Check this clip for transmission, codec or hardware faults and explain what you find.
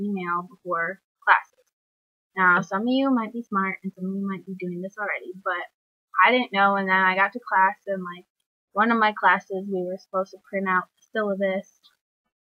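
Nothing stood out on listening; no transmission, codec or hardware problem could be heard anywhere in the clip.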